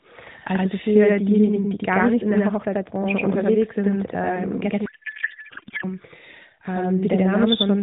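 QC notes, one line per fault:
Throughout: channel delay (doubling). Every syllable is followed by an equally loud copy about 85 ms later, a slap-echo doubling. One channel runs a full buffer behind the other (fits a 4096-sample buffer) and the two are summed to mono.
4.86–5.85 s: codec payload misread. For about a second the speech turns into garbled noise and warble that barely tracks it. The AMR frames were likely packed octet-aligned but decoded as bandwidth-efficient, so every field lands in the wrong place.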